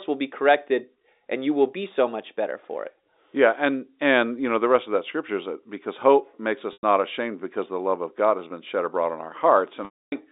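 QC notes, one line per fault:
6.73–6.83 s and 9.85–10.12 s, packet loss with pitch repetition: 100 ms and 270 ms go missing, and the last pitch period is repeated to bridge them. The shorter gap is a brief buzzy hold. The longer fades to silence within about 50 ms, then cross-fades back. There is no clean cut or click, unlike a plain dropout.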